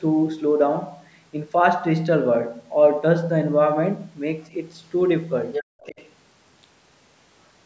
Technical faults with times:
4.43-4.47 other side's voice leaking through
5.53-6.12 other side's voice leaking through
5.64-5.80 background gated by the echo canceller

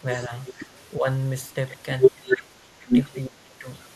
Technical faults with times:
0.47-0.53 echo leak
0.97-1.06 speech suppressed in double talk
3.27-3.68 speech suppressed in double talk

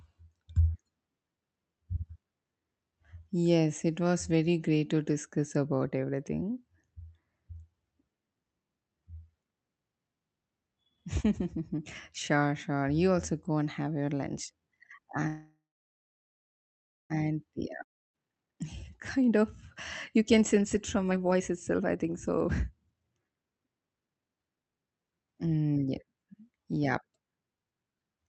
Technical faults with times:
15.27-17.13 call audio freeze
17.83-18.16 long network dropout
18.17-19.45 jitter buffer speed-up
20.18-24.57 jitter buffer speed-up

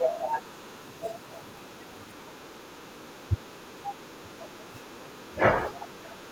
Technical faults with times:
0.44-1.28 other side's voice leaking through
2.16-5.17 other side's voice leaking through
2.22-6.31 speech suppressed in double talk

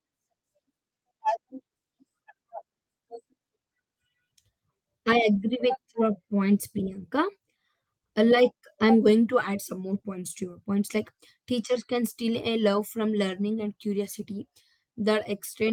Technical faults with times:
none

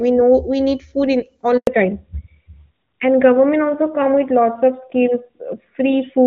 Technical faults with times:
1.57-1.67 handover gap
1.67-6.27 fallback to narrowband

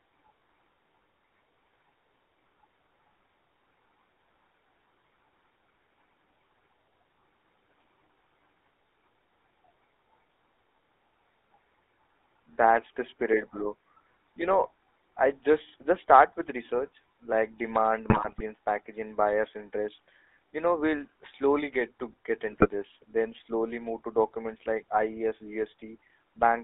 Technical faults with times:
0.00-26.64 GSM full-rate codec
18.10-18.43 GSM bit errors
22.50-22.70 GSM bit errors

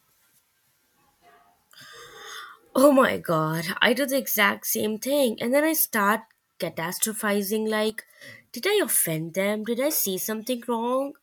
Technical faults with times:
7.90-8.22 one channel drops out

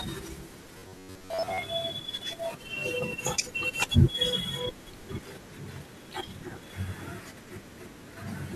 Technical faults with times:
0.78-1.63 robotic sound from repeated short buffers

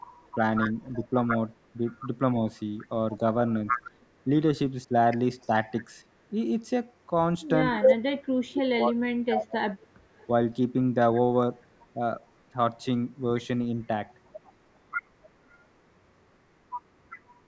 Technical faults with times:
0.00-2.01 echo leak
0.35-5.52 speech suppressed in double talk
3.71-5.46 echo leak
7.79-9.69 speech suppressed in double talk
7.88-7.96 echo leak
9.76-12.31 echo leak
9.97-10.05 background gated by the echo canceller
13.84-17.43 echo leak

